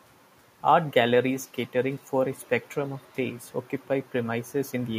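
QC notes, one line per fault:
No fault found in this speech clip.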